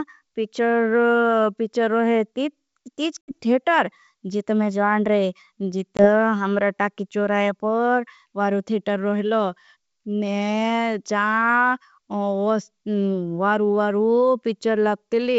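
Around 3.22 to 3.32 s, and again at 5.97 to 6.08 s, there's packet loss on an ADPCM call: 70 ms then 20 ms of abrupt silence. The decoder's predictor and step size drift from the sender's, so the speech comes back slightly distorted before settling, all heard through clean G.722 wideband.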